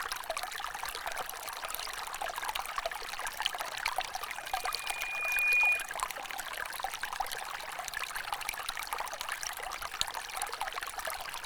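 An everyday-sound recording carries a loudspeaker feedback squeal from 4.29 to 5.94 s: a single 2.4 kHz tone that swells over roughly a second and a half until it sits around 10 dB above the surrounding sound. A microphone is hearing the speaker it feeds, and at 2.4 kHz the loop gain passes one. Unlike a steady interference whine, this tone starts small and grows by itself before the loop is broken.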